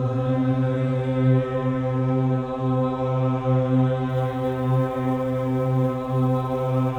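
From about 4.09 s to the end there's sample clock jitter: the converter's clock wanders by something like 7 microseconds, so samples land early or late. That slope-dependent error sits roughly 35 dB down, a grainy hiss that thickens on loud, bright passages and drops away in quiet.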